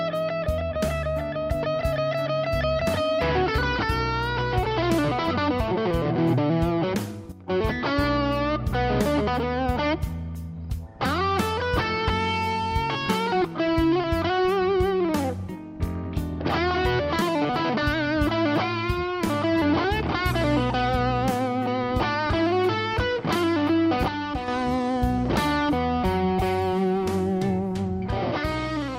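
A digital gain stage was most likely switched without a ramp, producing a sudden gain jump: from 7.32 to 7.48 s the sound and its background noise drop together by about 10 dB, and from 24.08 to 24.48 s by about 6 dB.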